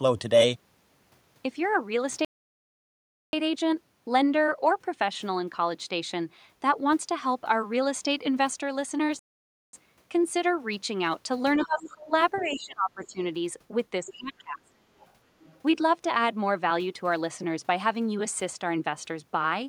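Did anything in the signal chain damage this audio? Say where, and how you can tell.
Yes. The first fault is a playback stall, likely from the player starving for data or its thread being blocked. The output falls silent from 2.25 to 3.33 s (1.08 s) and from 9.19 to 9.73 s (0.54 s). On a waveform these are flat gaps cutting into ongoing sound, and on a spectrogram they are blank vertical bands.

The second is the other side's voice leaking through, likely because the echo canceller in call processing left loudspeaker pickup in the microphone signal. A second voice appears at 11.64 to 11.90 s, 12.34 to 13.07 s, 14.06 to 14.13 s and 14.99 to 15.60 s, roughly 15 to 30 dB below the talker. It shows as faint, separate harmonic traces.

The third is speech suppressed in double talk, likely the canceller turning everything down while both sides spoke. The talker dips by about 20 to 25 dB at 11.66 to 12.12 s, 12.44 to 13.19 s and 14.01 to 14.72 s. 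Each dip coincides with the leaked voice, showing as envelope holes and darkened spectrogram patches.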